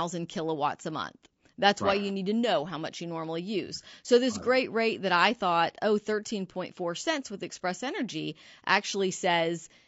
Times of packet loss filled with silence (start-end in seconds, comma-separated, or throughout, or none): none